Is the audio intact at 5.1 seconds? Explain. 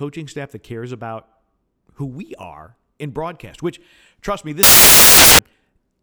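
No. Right after "broadcast which trust me", from about 4.63 to 5.39 s, there's a stretch of samples built from the wrong bytes. The bytes of each sample get assembled wrongly, so the jittery low bits dominate and you hear loud, harsh broadband noise.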